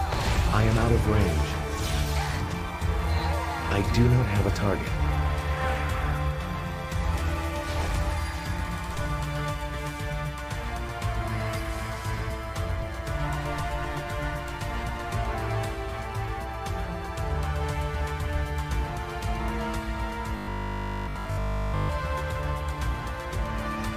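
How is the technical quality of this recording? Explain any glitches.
One glitch stands out: robotic sound from repeated short buffers, from 20.4 to 21.9 s. Fresh audio likely arrived too late, so a 20 ms slice was looped over the whole stretch, imposing a rigid, metallic 50 Hz buzz while the real material was skipped.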